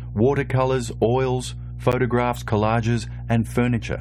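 A ground loop or a nearby transformer is coupling the 60 Hz power line into this speech recording, producing mains hum: a steady low tone with some low harmonics that runs the whole clip, fairly loud at roughly 10 dB below the speech itself. At 1.92 s, the time stamps of two stream segments fail to meet, leaving a gap between stream segments that the player fills with about 12 ms of silence, a hard-edged hole in the sound. Nothing is lost; the speech simply resumes slightly later.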